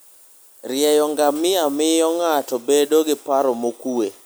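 Nothing stood out on listening to this recording.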